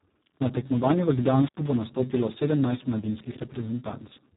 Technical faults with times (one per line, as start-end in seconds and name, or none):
0.00-4.37 Speex codec
1.45-1.59 intermittent contact